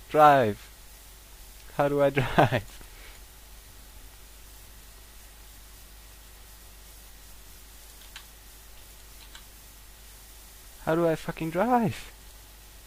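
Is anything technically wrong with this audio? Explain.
No, nothing technically wrong is audible in this audio.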